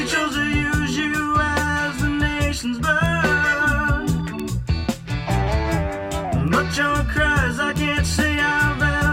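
Bit error spikes tick at 1.99, 3.06, 4.40, 6.48, 7.76 and 8.64 s. A flipped bit jolts a sample or two, peaking at about -20 to -8 dBFS. Each is a sharp broadband click.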